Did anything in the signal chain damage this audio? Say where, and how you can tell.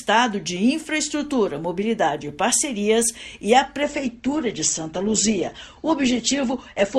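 Yes, at the network stage, with the codec carrying the damage. From 3.82 s to the end, the audio switches abruptly to a thinner rendering with nothing above 8.2 kHz and stronger codec artefacts, with no silence at the join. This is an adaptive stream at a lower bitrate: the player swapped to a cheaper encode, which fits a step from Opus at about 64 kbit/s down to around 16 kbit/s. A dropout or packet loss would leave a gap or glitch, and here there is none.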